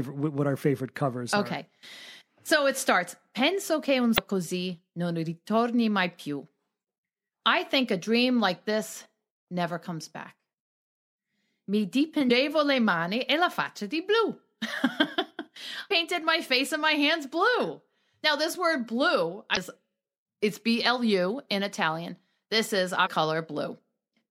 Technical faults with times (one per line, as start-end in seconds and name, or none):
4.14-4.19 damaged data in a compressed stream
12.27-12.31 damaged data in a compressed stream
15.87-15.91 damaged data in a compressed stream
19.53-19.57 damaged data in a compressed stream
23.06-23.08 damaged data in a compressed stream